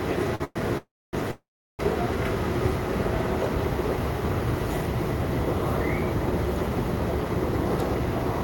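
A short stall from a late packet hits this recording of everyday sounds at 0.35 to 0.42 s: the jitter buffer ran dry when a packet failed to arrive on time, so the receiver held the last sound for about 47 ms, with a slight buzz or dip, and then carried on from the same point with nothing lost, only pushed 47 ms later. Call audio freezes follow at 0.44 to 0.58 s, 0.77 to 1.15 s and 1.31 to 1.81 s, likely from packets held up in transit that emptied the buffer again. Each time the last sound is continued as a fading buzz or hiss and then drops out, with about 10 ms, 250 ms and 360 ms of silence inside fills of 114, 355 and 480 ms. The audio resumes exactly where it stopped, so nothing is missing, but the gaps stack up and delay everything after them.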